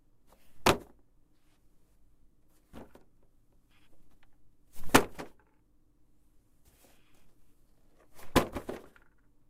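Skip ahead at 2.73 to 2.75 s: about 0.7 s of the sound was dropped, either in transit or by an overflowing jitter buffer, while later audio was already queued. Playback jumps straight to that later material with no gap, the two edges joined almost directly.

Jitter buffer speed-up from 2.88 to 4.25 s: the buffer held more audio than its target, so the receiver cut short pitch-period-sized pieces again and again, removing about a tenth of a second in total. The sound runs at 108% speed with unchanged pitch and comes across as hurried.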